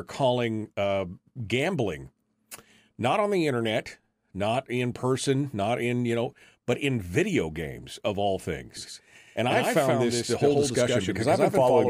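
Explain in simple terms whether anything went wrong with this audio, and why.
Something likely captured the same speech twice, with one copy arriving late, creating a doubled audio track. From 8.77 s, just after "video games of all", a quieter duplicate trails about a tenth of a second behind, making the speech sound stuttery and echoey right to the end.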